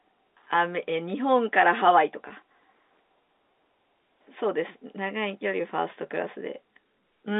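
At 2.28 to 2.30 s the speech briefly holds with a buzzy sustain. This is packet loss with pitch repetition: about 20 ms of audio went missing, which fits a single lost packet, and the receiver bridged the gap by repeating the last pitch period. The surrounding G.711 telephone-band sound carries on through it.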